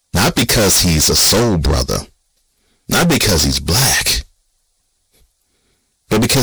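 Hard clipping runs through the whole speech clip. The signal is driven about 29 dB past the limit, flattening roughly a third of all samples into harsh fuzz.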